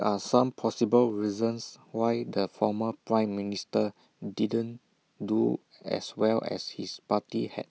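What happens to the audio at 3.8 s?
At 3.8 s the speech carries on intact, with no dropout, click, distortion or other fault at that point.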